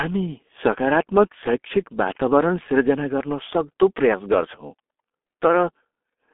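G.723.1 codec damage runs through the entire speech clip: heavy low-bitrate coding, consistent with roughly 6.3 kbit/s, strips everything above 3.8 kHz from a 250 Hz to 3.5 kHz line band. Slow 30 ms frame updates leave the voice muffled and hoarse, with smeared consonants.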